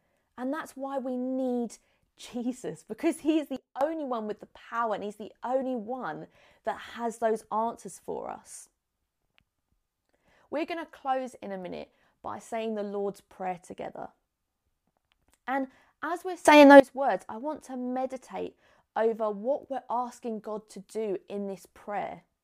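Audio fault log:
3.56–3.81 s, sudden gain jump: right after "because he is" the whole signal, background noise included, drops by about 17 dB in a single step, then comes back before "one with the power". Likely a gain setting applied with no ramp.
16.45–16.80 s, sudden gain jump: after "as we're" everything leaps up by about 20 dB at once, noise floor with it, until "words I want to". Likely a bit shift or unramped gain change, hence the hard edges.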